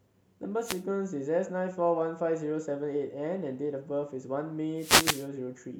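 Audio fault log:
0.60–0.85 s and 4.76–5.29 s, wireless microphone noise hit: twice the radio link of the speech microphone fades as reflected signals cancel at the receiver, so its noise floor surges up as a brief swish of static, with the second hit lasting longer. On a spectrogram each appears as a broadband hiss band lifting across all frequencies, and in the waveform as fuzzy noise bursts.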